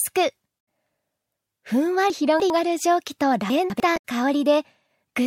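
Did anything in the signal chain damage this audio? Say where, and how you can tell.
Yes. Damaged data in a compressed stream, at the codec stage, shows up at 0.56–0.59 s and 3.93–4.03 s as brief glitches where the decoder lost frame sync. A spectrogram shows a broadband smear, and the waveform jumps abruptly.

Chunks out of order, from the network or buffer stage, occur at 2.1–2.5 s, where a 100 ms chunk plays three chunks late, and at 3.5–3.8 s, two chunks late. Each produces three hard joins, visible as vertical spectrogram lines and waveform discontinuities, with the sound briefly jumbled.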